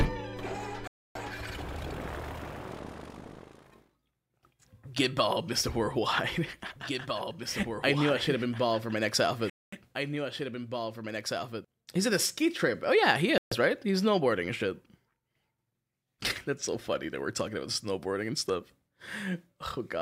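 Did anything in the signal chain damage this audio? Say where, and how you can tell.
Yes. The wireless playback link most likely suffered Bluetooth stalls: interference delayed packets, the headphone buffer emptied, and output halted until retransmissions caught up. The sound drops abruptly to silence at 0.87 s for 279 ms, at 9.50 s for 227 ms, and at 13.38 s for 137 ms, then resumes. There is no fade at either edge, which points to a starved buffer rather than processing.

From 6.75 s to 11.65 s there is a doubled audio track, most likely from a second, slower capture path or an edit that stacked two copies. A full-band duplicate trails the original by roughly two seconds, about 5 dB quieter. It is dry, with no decay or room colour, and it switches on and off abruptly at those boundaries, so it reads as a mixing-stage duplication, not an acoustic echo.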